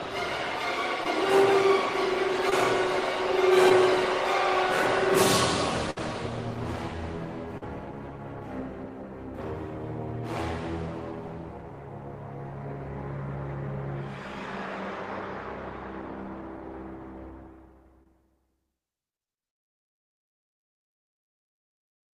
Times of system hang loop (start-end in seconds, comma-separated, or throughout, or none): none